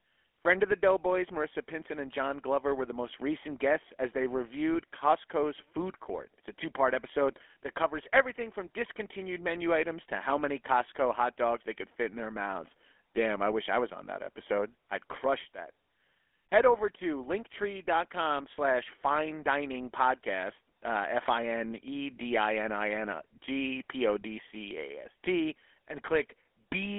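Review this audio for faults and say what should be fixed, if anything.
Speech throughout sounds buzzy and gravelly, confined to roughly 300 Hz to 3.4 kHz. This is the GSM full-rate codec, whose sparse pulse excitation, consistent with 13 kbit/s, rebuilds the voice coarsely. To prevent it, capture or transfer the recording over a wideband path rather than a GSM voice channel.

From 4.72 to 4.77 s, just after "recent guests as they", a brief squawking, gargled burst breaks the speech. These are GSM bit errors: corrupted filter, pitch or gain values distort the decoded output, pointing to about two damaged frames. To prevent it, record on a stronger, error-free link or a local recorder instead of a weak mobile connection.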